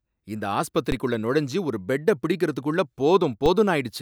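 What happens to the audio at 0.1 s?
At 0.1 s the audio plays through intact, with no dropout, click, distortion or other fault at that moment.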